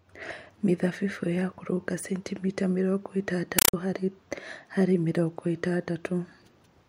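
After "centimita mĩrongo", from 3.59 to 3.74 s, loud chattering static replaces the speech. This is a compressed stream played as audio. Undecoded data, likely AC-3, plays as 5.33 ms noise bursts repeating 31.25 times a second.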